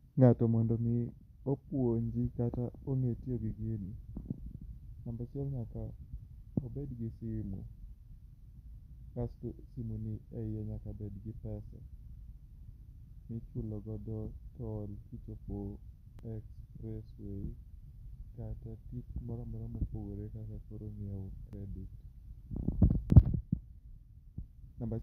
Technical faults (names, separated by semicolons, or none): dropped buffer (overrun)